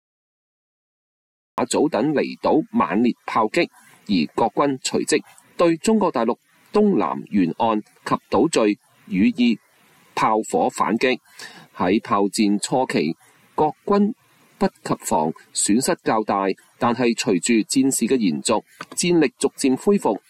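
The clip opens with a cut-off start: digital silence from 0.00 to 1.58 s, then the sound enters abruptly already in progress. Capture began late, after the source was sounding, so there is no natural attack or fade-in, only a hard edge at 1.58 s.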